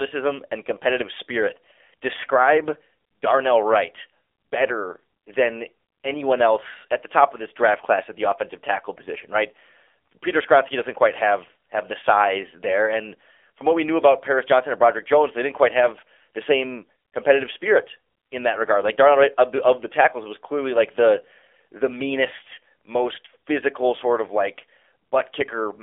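Speech runs through an AMR narrowband mobile codec for the whole clip. Nothing above 3.6 kHz survives, and the band sits roughly between 300 Hz and 3.5 kHz, like a phone line. The codec rebuilds the voice from a vocal-tract model fed by a few pulses per 5 ms slice of each 20 ms frame. At this low bit budget the damage is plain. The voice sounds buzzy and synthetic, which fits a rate around 7.4 kbps.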